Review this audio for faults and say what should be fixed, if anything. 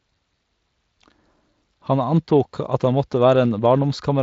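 Nothing needs fixing: the speech comes through a Speex-coded path at 23.8 kbps, with content ending at about 7.6 kHz, and no technical faults are present.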